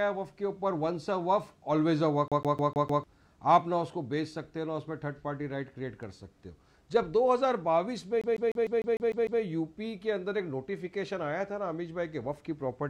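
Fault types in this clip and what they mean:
CD stuck on one turn: at 2.28–3.04 s and 8.21–9.42 s, the laser keeps jumping back one track, repeating a 151 ms slice five, then eight times, in an even stutter.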